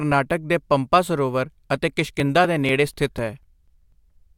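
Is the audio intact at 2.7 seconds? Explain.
No. From 1.95 to 4.17 s, just after "ਪੰਪਾ ਸਰੋਵਰ ਅਤੇ", periodic USB or driver dropouts skip roughly 4 ms of speech every 0.25 s, heard as regular ticks.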